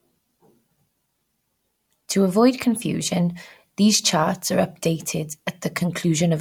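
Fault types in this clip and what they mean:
No technical fault can be heard anywhere in this speech recording; the signal stays continuous and stable throughout.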